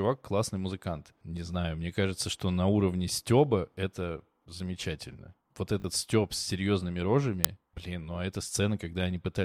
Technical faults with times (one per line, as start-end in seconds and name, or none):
5.80-5.84 repeated buffer
7.44 uninitialised buffer